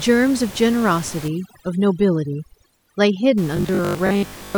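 It's a speech recording with room noise sitting about 18 dB under the voice, and two faults show up. From 1.28 to 3.38 s there's overdone noise removal. The denoiser clamps down hard on any frequency band it thinks is close to that room noise, so the background collapses into near silence with little twinkling specks, and the softer parts of the voice get pulled out too. Then from 3.57 to 4.57 s the voice turns into a rigid metallic buzz at 50 Hz, the robotic sound from repeated short buffers. The likely cause is fresh audio arriving too late, with the playback side looping the last chunk to fill the gap. A 50 Hz buzz fits chunks about 20 ms long, and roughly half the audio in that stretch seems to be repeats, so the voice still loosely tracks the speech underneath.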